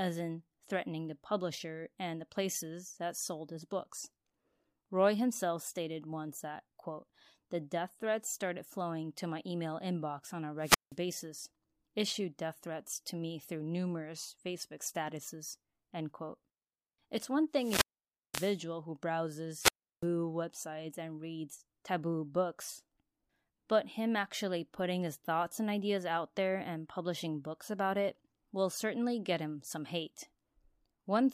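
Wireless microphone squelch dropout occurs three times in this speech. Each time the analogue FM link weakens until the receiver's squelch gate closes. After "email inbox on a", the fault runs from 10.61 to 10.96 s and hiss rises before a mute of about 176 ms. From 17.53 to 18.61 s the silent hole lasts about 527 ms. From 19.57 to 20.07 s a mute of about 344 ms passes before the voice returns on "websites and reads taboo".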